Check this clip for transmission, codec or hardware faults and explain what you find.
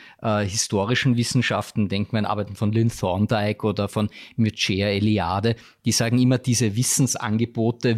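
Checking the clip turns up no faults to explain.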